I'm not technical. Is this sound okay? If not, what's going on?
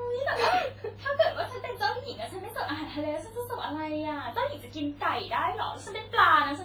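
No. From start to finish the speech has a ringing, washy quality, with a hiss that swells and fades along with the voice instead of sitting steady underneath. That points to heavy compression, likely WMA compression. Ordinary background noise would stay constant.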